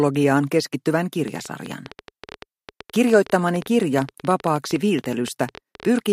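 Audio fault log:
1.28–6.00 s, train of clicks: a run of around fifty sharp, near-identical pulses arrives at an average of about 11 per second, spaced unevenly rather than to a steady beat, so it sounds like erratic ticking laid over the sound and continuing through quieter moments. The peaks rise roughly 5 dB above the surrounding audio, making each pop stand out. The likely source is interference from nearby equipment or a faulty connection or power supply.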